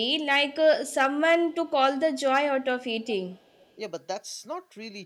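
At 1.52 to 1.71 s, and again for a longer stretch from 3.05 to 3.75 s, there's an echo leak: a faint, delayed copy of the speech trailing about 385 ms behind, sitting very low, roughly 35 dB under the direct sound. It's most likely the far end running a loudspeaker whose echo canceller didn't fully scrub what its microphone picked up, so a leftover scrap got sent back down the line.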